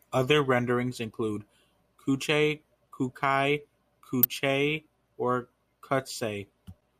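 At 4.23 s, just after "renderings include cuchay kucai", a sharp snap cuts in at about -5 dBFS. It is likely an electrical switching spike from a nearby arc.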